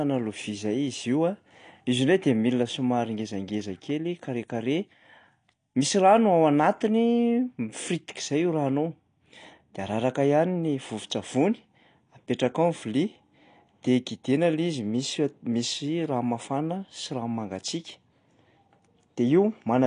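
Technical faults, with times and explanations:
Throughout, AAC compression: the speech sounds dull and smeared, with plainly audible coding damage, which points to a low bitrate near 32 kbps, likely from AAC-LC. A spectrogram shows a hard, flat ceiling, with nothing above 9.8 kHz.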